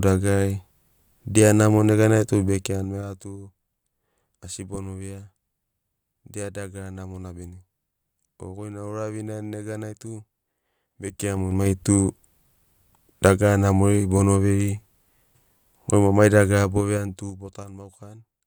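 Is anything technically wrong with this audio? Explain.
Yes. Zipper noise occurs from 2.4 to 3.36 s, 11.0 to 11.8 s and 16.56 to 17.76 s, where the level is moved down, up, then down again in 3 dB jumps with no smoothing. Each jump leaves a small click, so a ticking zipper rides on the speech while the level changes.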